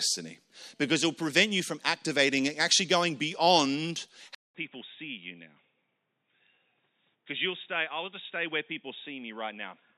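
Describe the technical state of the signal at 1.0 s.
At 1.0 s the signal is intact, with no audible fault at that moment.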